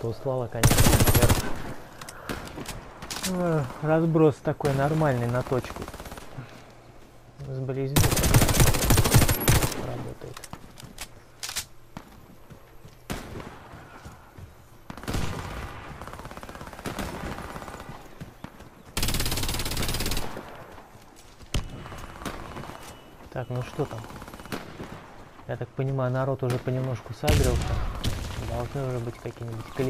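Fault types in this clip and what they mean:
No faults can be heard.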